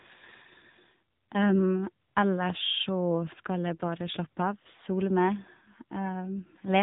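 Speech, and the whole way through it's got that AMR narrowband mobile codec sound: nothing above about 3.8 kHz, plus plainly audible synthetic, buzzy coding damage from the vocal-tract model running short on bits, which fits AMR-NB's low 7.95 kbps mode.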